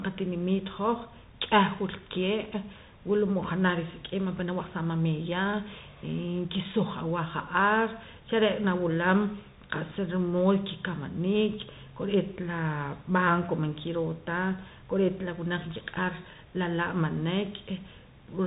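Throughout, the speech carries Bluetooth CVSD headset codec damage: nothing passes above 3.8 kHz, s sounds turn scratchy, and a granular hiss sits underneath, consistent with 64 kbps one-bit delta coding.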